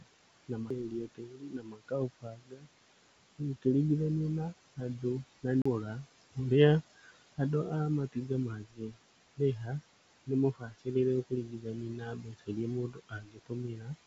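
Noise suppressor artifacts run through the whole clip: the room noise, about 15 dB below the speech, is pulled down by about 20 dB between phrases and returns under them.

From 0 to 2.68 s, speech cut by the noise suppressor swallows roughly two seconds of quieter speech, dipping up to about 22 dB. Unlike a dropout, the speech fades with the background instead of breaking off.

At 0.70 s a CD skip gives a brief tick and a sudden jump to another point in the audio. The mute lasts only about 5 ms, and the jump in continuity is what separates it from a suppressor dip.

Between 4.52 and 5.45 s and between 5.83 and 6.38 s, short stretches of about 0.1 s and 0.2 s are turned down by about 17 dB, leaving faint word edges.

At 5.62 to 5.66 s a second CD skip mutes for about 40 ms, then resumes from a different place.

From 6.98 to 13.96 s the suppressor cuts about three seconds of soft speech by up to about 21 dB.

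Over the G.722 call path the audio holds nothing above 8 kHz.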